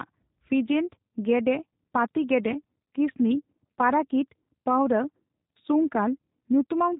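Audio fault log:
throughout, G.729 codec: nothing above 3.8 kHz survives, and the speech is rebuilt from a vocal tract filter driven by a few pulses per frame, giving a plainly audible rough, buzzy, synthetic edge that fits an 8 kbit/s G.729A stream, unlike a simple low-pass cut.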